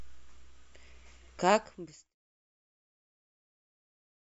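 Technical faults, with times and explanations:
No technical faults can be heard in this speech. The level eases down in a smooth fade-out from roughly 1.5 s to 2.16 s, with no click or hard edge where it ends.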